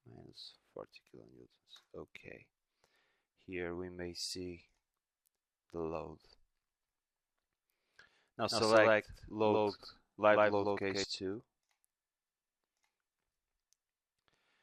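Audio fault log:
8.51–11.04 s, doubled audio track: A second copy of the sound, likely captured again by a slower path, runs about 150 ms behind at roughly the same level. It is full-band with no room decay, giving a hard slapback echo that starts and stops abruptly.
9.21–9.81 s, repeated stalls (stutter): Packets arrived late, so the jitter buffer ran dry four times. The receiver stretched the last sound to fill 52 ms in all, with the longest stall 25 ms. Nothing is lost, but the audio drags and stutters briefly.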